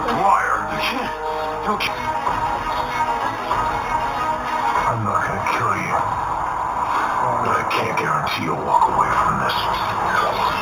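Throughout the sound there is imaging from linear upsampling, which fits an 8 kHz source raised to 48 kHz by straight-line interpolation. The top is dulled, and a faint mirrored copy sits between 4 and 8 kHz, roughly 20 dB down, giving a metallic shimmer. Unlike aliasing, it mirrors upward above 4 kHz rather than folding down into the band.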